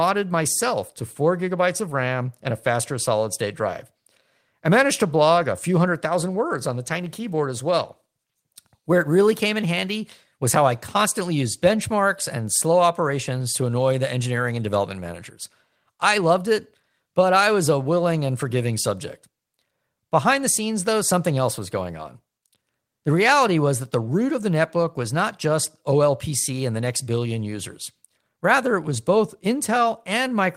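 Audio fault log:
5.35–5.41 s and 7.27 s: lost packet rebuilt from error correction. Low-bitrate backup copies filled both losses, so there is no gap. Those brief stretches sound rougher and noisier.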